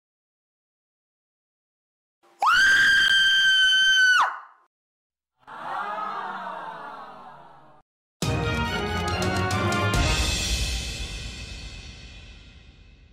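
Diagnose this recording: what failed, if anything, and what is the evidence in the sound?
A gap between chunks at 3.08 s points to the storage or playback stage: a hole of about 13 ms with hard edges cuts into the sound, then the audio resumes intact. Chunked delivery left an empty interval at the join instead of splicing the pieces seamlessly.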